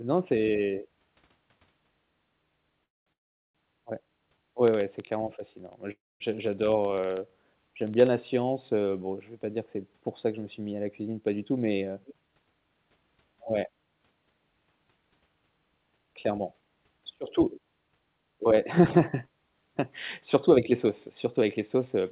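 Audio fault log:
2.84–3.09 s, 3.12–3.58 s and 5.92–6.23 s, call audio freeze: packets were likely held up in transit, so the jitter buffer ran dry. Each time the receiver carried the last sound on only briefly before it fell to silence, leaving gaps of about 220 ms, 420 ms and 230 ms of quiet. The speech then resumes exactly where it stopped, with nothing lost, so each pause pushes the rest of the audio 224 ms, 421 ms and 286 ms later.
4.68–8.07 s, periodic USB or driver dropouts: something blocked the audio device path every 64 ms, and about 50 tiny slices of signal, each a small fraction of a millisecond, were replaced by silence. Because the losses are so evenly spaced they form a steady train of ticks, about 16 per second, heard only while speech is present and ending just before "la science heu bon".
11.13–13.58 s, 15.76–17.61 s and 20.50–22.00 s, jitter buffer speed-up: the buffer had built up more delay than it targets, so the receiver cut out short pitch-period-sized pieces many times in a row to catch up. 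The first run, right after "suis mis à la", removes roughly 0.3 s and plays 12% fast. The second removes about 0.15 s at 8% fast, and the last about 0.07 s at 5% fast. The pitch stays put, but the speech sounds hurried. All of this passes through the G.711 mu-law call codec at 64 kbps, which leaves nothing above 4 kHz.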